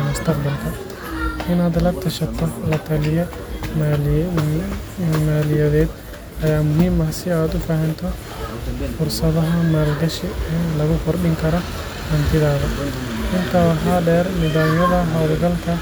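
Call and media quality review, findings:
No call or media quality findings to report for this clip.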